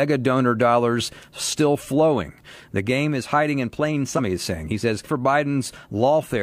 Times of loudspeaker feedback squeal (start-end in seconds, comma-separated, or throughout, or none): none